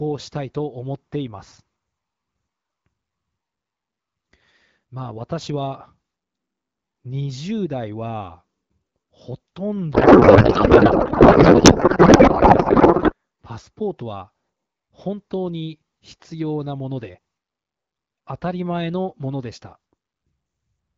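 From 9.93 to 13.13 s a codec payload misread replaces the speech with garbled noise and warble that barely tracks it. This fits octet-aligned AMR frames being unpacked as bandwidth-efficient, so fields land in the wrong places. The spectrogram shows smeared, structureless energy instead of harmonics. The AMR-WB speech on either side sounds clear, consistent with about 12.65 kbit/s.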